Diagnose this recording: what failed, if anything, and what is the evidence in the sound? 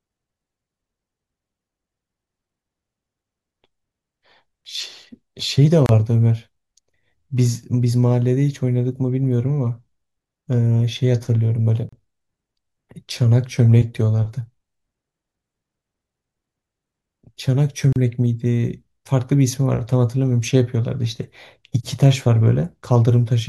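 The failure sits at the codec stage: a gap at a join of encoded pieces. The speech cuts to silence at 5.86–5.89 s, 11.89–11.93 s and 17.93–17.96 s, each about 30 to 35 ms, recurring every 6.0 s. Separately encoded segments were joined without trimming the encoder's start-up delay and last-frame padding. Unlike network dropouts, the gaps are strictly periodic, and the speech resumes exactly where it stopped, with nothing skipped.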